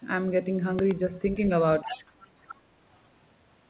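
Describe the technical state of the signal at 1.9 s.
At 1.9 s the speech is dipping from speech suppressed in double talk, which runs from 1.83 to 2.05 s and cuts the level by roughly 15 dB at its deepest. Both ends were likely talking at once, so the echo canceller turned everything down. On the waveform the envelope sags sharply, and the spectrogram shows the harmonics fading.

Overlapping this, the other side's voice is leaking through from 1.89 to 2.27 s, around 15 dB below the talker. It sounds like a faint second voice, most likely loudspeaker echo that the canceller did not fully remove. On the spectrogram it appears as weaker, misaligned harmonic traces, like the rest of the call path held below 4 kHz.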